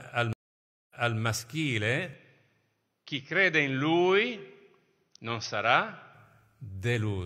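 Stream reconnect at 0.33 to 1.18 s: the connection drops, the speech goes silent for about 0.57 s, and a fresh decoder picks up the stream about 0.28 s earlier than where it broke off, so a short stretch is heard twice as the server resends its buffered burst.

Input switched to a poorer device from 2.13 to 6.14 s: with no gap at the switch, the speech suddenly turns dull, with nothing above 6.3 kHz, and a faint new noise floor appears roughly 50 dB down while loudness barely changes. This likely comes from the system swapping to a narrower-band microphone.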